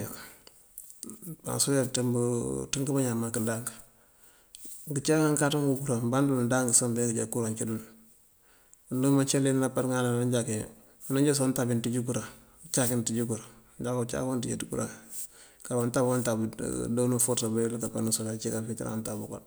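No audible technical faults.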